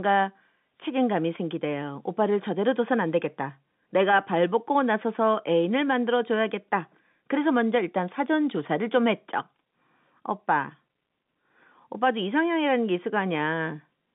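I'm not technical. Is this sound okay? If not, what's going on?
Yes, this one's fine: it has the slightly narrow sound of an ordinary phone line, which is normal for a call, and nothing has gone wrong with it.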